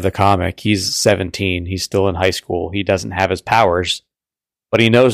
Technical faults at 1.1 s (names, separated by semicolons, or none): hard clipping